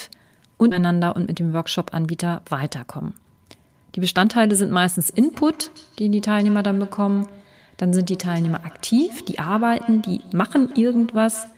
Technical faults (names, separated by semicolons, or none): skip ahead; jitter buffer speed-up; feedback echo between two devices